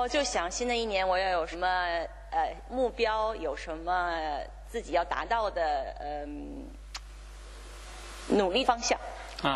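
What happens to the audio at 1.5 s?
At 1.51 to 1.56 s the audio jumps forward. These are compressed frames skipped. A short run of encoded frames never reached the output, either missing from the file or rejected by the decoder as damaged. About a tenth of a second of material is lost. The gap fits roughly two frames of about 46 ms each.

Mains hum also runs under this moment, as it does throughout. It is a steady low tone at 50 Hz, sitting about 15 dB below the signal. A ground loop or a nearby transformer has coupled the power line into the signal path.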